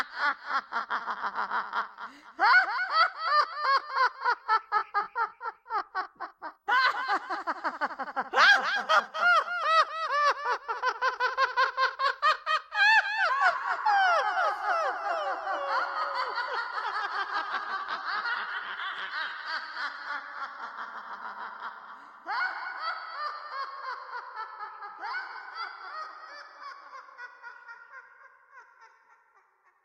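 Call audio with a call bitrate drop from 16.08 to 22.49 s: coarse, muffled coding, worst for about 4.9 s, fitting roughly 64 falling to 18 kbps, shows as a lowered spectrogram high-frequency ceiling.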